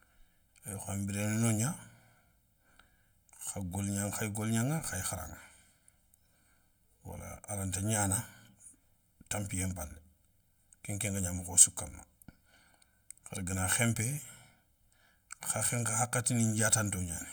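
Hollow, phasey speech runs throughout, from channel delay (comb filtering): one channel lags by roughly 1.5 ms, and summing to mono carves evenly spaced notches starting near 400 Hz.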